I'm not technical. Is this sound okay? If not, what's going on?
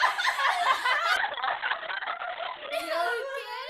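No. From about 1.17 s to 2.78 s there is a call bitrate drop. The connection briefly seemed too slow, so the call software sent the sound using far less data. To save space it threw away the upper range, keeping only content below about 4 kHz, and coded the rest more crudely. For roughly a second and a half the sound turns muffled and rough, then returns to full clarity.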